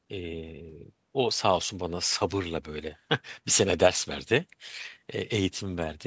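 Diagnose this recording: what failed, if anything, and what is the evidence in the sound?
Nothing failed: the speech has passed through a call's microphone processing, which explains the ceiling at 8 kHz and the trimmed lowest bass, and that is how this stage normally behaves.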